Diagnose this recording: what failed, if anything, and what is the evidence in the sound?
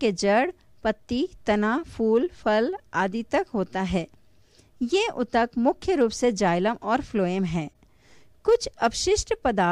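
Nothing in this recording points to a failure at any stage of the signal chain. The sound holds steady throughout, with no event that calls for a mechanism to explain it.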